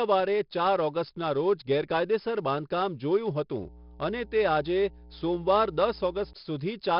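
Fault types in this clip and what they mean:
4-bit ADPCM compression: Throughout the clip, each sample is coded as a coarse 4-bit step from a predicted value, so a gritty hiss rides on every loud syllable and sharp onsets break up. Nothing is heard above 5.3 kHz, and the heavy damage fits roughly 44 kbps.
Mains hum: From 3.63 to 6.33 s, a steady 60 Hz tone sits under the speech at roughly 20 dB below it. This is the power line leaking into the signal path, most likely through a ground loop or a nearby transformer.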